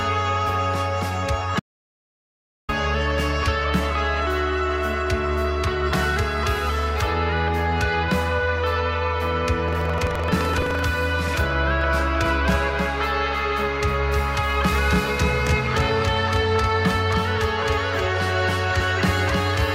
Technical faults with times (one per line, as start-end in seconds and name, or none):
1.60-2.69 audio dropout to silence
9.64-10.81 buffer tearing
11.81-19.74 doubled audio track